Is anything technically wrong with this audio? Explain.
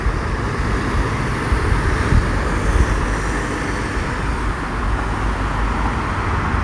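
No, nothing in this recording of sounds stood out as technically wrong on listening.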